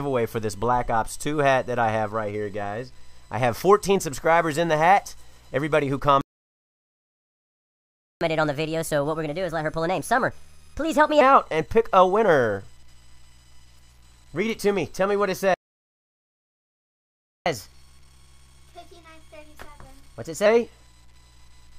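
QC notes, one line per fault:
6.21–8.21 s, playback stall: the sound cuts off mid-flow and the output stays silent for 2.0 s, likely because the player ran dry or its thread was blocked. On a waveform this is a flat line. A spectrogram shows a blank vertical band with hard edges.
8.21–11.21 s, catch-up at higher speed: playback resumes at 1.25× speed for 3 s, lifting pitch about four semitones as the backlog is drained by resampling. A spectrogram shows harmonics shifted upward and events compressed in time, then a drop back to normal spacing.
15.54–17.46 s, playback stall: a second dropout of 1.92 s, where the audio halts abruptly, likely from the same buffer underrun or blocked thread. The waveform flatlines to silence. The spectrogram shows an empty gap with sharp onset and offset.
17.46–20.46 s, catch-up at higher speed: the player runs 1.1× fast for 3 s, raising pitch roughly one and a half semitones, which is a milder but audible rush. 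Spectral lines sit slightly higher and events are mildly compressed in time until the return to normal rate.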